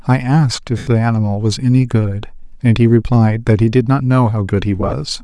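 Bluetooth LC3 compression is audible throughout the speech: the upper spectrum sounds hollowed out and refilled with noise, giving the voice a breathy, grainy edge. The cause is likely the LC3 codec running at a modest rate. The damage level fits about 48 kbps in 10 ms frames, where too few bits remain for the treble, so the encoder zeroes many high-frequency bands and the decoder substitutes shaped noise.

Lost LE Audio frames follow from 0.78 to 0.87 s, a 90 ms gap consistent with nine consecutive 10 ms frames going missing. The decoder keeps replaying the last spectrum with randomised signs, so the voice turns into a noisy smear that fades as concealment tapers off. A second loss from 4.81 to 4.93 s is broken up, about 70 ms of missing audio scattered over 120 ms with no dropout longer than a few tens of milliseconds, so it sounds like brief, repeated grainy flutters.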